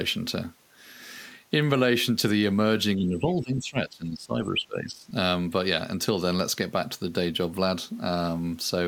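From 2.97 to 5.14 s the speech level sinks by roughly 15 dB at its deepest, for about two seconds in total. This is speech suppressed in double talk, likely an echo canceller unable to separate the near talker from simultaneous far-end echo and attenuating the near talker.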